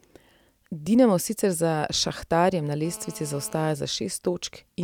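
A hard, raspy buzz cuts into the speech from 2.85 to 3.74 s, sitting about 21 dB below it, pitched at 217 Hz and thick with harmonics. This is GSM phone buzz: a nearby 2G phone's transmit bursts, here a data transfer, were rectified by the audio circuitry.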